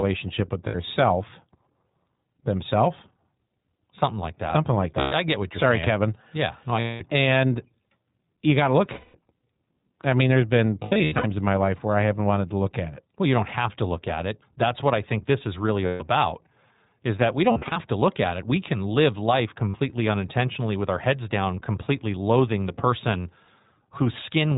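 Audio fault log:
Throughout, iLBC codec: the whole clip is squeezed into narrowband, with nothing above 4 kHz, so it sounds dull and phone-like. The damage is plainly audible: the speech has a slightly rough, synthetic edge because each short frame's excitation is coded on its own and only approximately. The texture fits iLBC's 20 ms-frame mode at 15.2 kbps.
0.68 to 19.76 s, lost iLBC frames: there are eight dropouts. The first runs from 0.68 to 0.76 s and lasts 60 ms. The next, at 5.00 to 5.13 s, lasts 120 ms and comes just before "I I get what". At 6.80 to 7.02 s, 200 ms goes right after "no I". Then 8.92 to 9.16 s loses 220 ms. From 10.84 to 11.26 s, 280 ms is lost in bits spread over 400 ms, the longest run only about 70 ms. At 15.86 to 16.03 s, 140 ms goes. From 17.52 to 17.78 s, 160 ms is lost, scattered over 240 ms, with the longest run about 40 ms. The last is 60 ms at 19.69 to 19.76 s, between "can live life" and "unintentionally with our heads". 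Each gap is filled by the decoder repeating the last pitch cycle with noise mixed in, so you hear a held, slightly buzzy or breathy vowel that fades on the longer losses. Because iLBC frames stand alone, the speech snaps back cleanly right after each gap.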